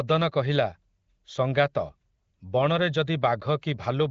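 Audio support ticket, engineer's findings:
No faults found in the speech: content stops near 7.5 kHz with light coding texture, consistent with the AMR wideband (HD Voice) path at a mid-to-high rate around 15.85 kbit/s.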